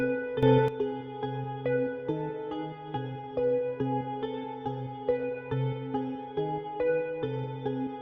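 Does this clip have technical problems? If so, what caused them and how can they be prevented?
Yes. From 0.43 to 0.68 s, an unramped digital gain change likely causes a sudden gain jump: sound and background noise rise together by about 12 dB. Ramping every gain change smoothly over a few milliseconds would prevent it.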